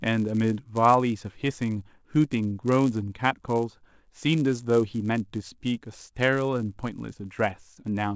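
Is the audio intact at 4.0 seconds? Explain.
No. At 4.0 seconds, as throughout the speech, the resampler is restarted on every block. Each 10 ms block is converted from 44.1 kHz to 16 kHz in isolation, so every edge carries a small error. These errors form a 100 Hz buzz under the signal.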